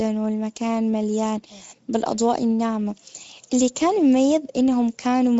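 Throughout the clip, the speech has passed through the Speex codec at a middle setting. The hoarseness points to roughly 17 kbps. Too few bits were left to code the excitation, so the voice carries a plainly audible rough, grainy, noisy edge. Nothing reaches above 7.6 kHz, which fits Speex's wideband mode. The upper band, from 4 kHz up, sounds like a shaped hiss standing in for real detail rather than true high-frequency content.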